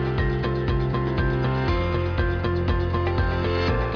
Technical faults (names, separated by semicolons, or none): aliasing